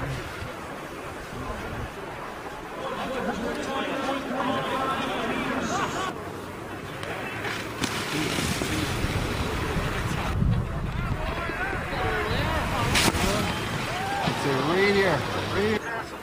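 No technical faults are audible.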